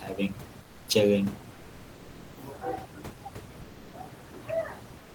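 From 0.63 to 0.87 s and again from 4.99 s to the end, the room's background gives way to comfort noise, steady and featureless, about 5 dB and then about 2 dB quieter, likely from discontinuous transmission. On a spectrogram, textured noise turns into smooth, uniform bands.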